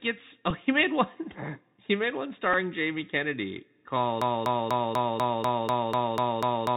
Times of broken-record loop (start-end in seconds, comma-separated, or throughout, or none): 4.22-6.76